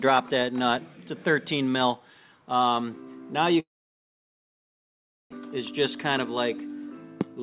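From 3.6 to 5.34 s there is a long network dropout, most likely from packets arriving too late or not at all. The last sound decays into a fading buzz, then near-silence for about 1.65 s, and a full second of audio is simply gone when playback resumes. The length and that unrecoverable gap set it apart from brief packet-loss concealment.

At 7.39 to 7.43 s a jitter buffer speed-up compresses the audio to roughly double speed as the receiver trims about 40 ms of pitch-period slices to reduce its delay. The pitch stays put, unlike a pitch shift, so it sounds rushed rather than higher, within the 4 kHz band of the G.711 path.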